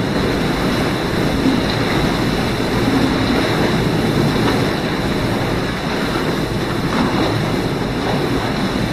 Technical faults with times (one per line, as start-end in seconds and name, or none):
0.00-4.72 doubled audio track